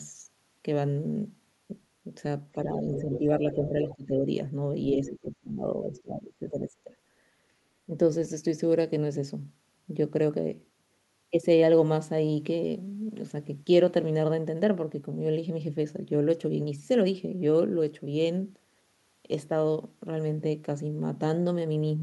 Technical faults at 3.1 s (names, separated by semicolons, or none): speech suppressed in double talk; other side's voice leaking through